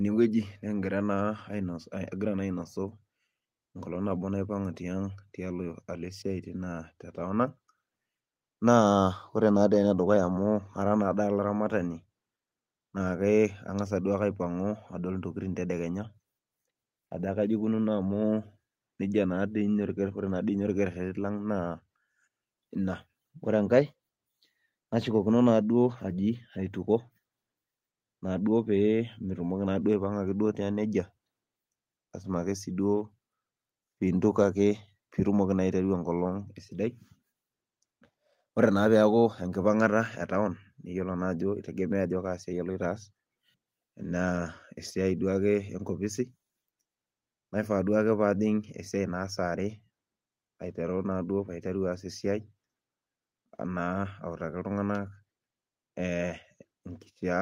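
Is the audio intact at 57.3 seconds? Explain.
Yes, the audio at 57.3 seconds is intact, with no fault audible at that moment.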